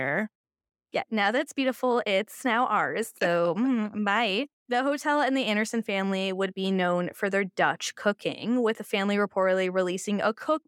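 A speech recording with no technical faults to report.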